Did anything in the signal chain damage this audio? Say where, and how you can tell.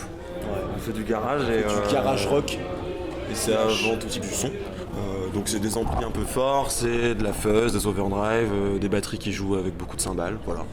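Yes. A skip ahead at 4.09 to 4.11 s means about a second of audio is missing. Playback jumps straight forward with nothing filled in, so the two sides meet almost directly. The fault sits in the network or its jitter buffer, where the stretch was dropped while later audio waited.

A jitter buffer speed-up runs from 4.17 to 7.05 s. The audio plays at about 114% speed while the pitch stays the same, so it sounds hurried. The receiver cut short pitch-period pieces, about 0.4 s in total, to drain the excess buffered delay.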